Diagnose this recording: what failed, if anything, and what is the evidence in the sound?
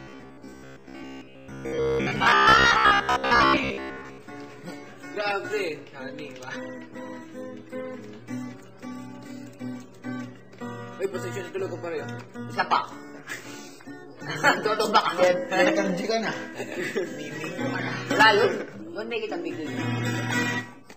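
From 0.02 s to 4.18 s the sound turns into robotic sound from repeated short buffers. A rigid, metallic buzz at 66.7 Hz sits over the audio and follows it only roughly. That rate implies a repeated chunk about 15 ms long. Around 70 percent of this stretch is repetition rather than new material. The likely cause is at the driver or buffer stage. Audio arrived too seldom, so the last short block was replayed while real audio was skipped.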